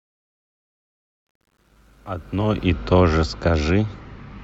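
From the start to 2.66 s the fade-in sounds gritty, worst before 2.11 s: truncation distortion, the fade kept only about 10 bits without dither.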